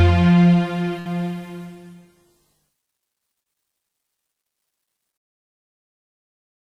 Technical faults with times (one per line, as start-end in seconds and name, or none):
0.99-1.07 burst of packet loss
3.43-3.47 short concealed packet loss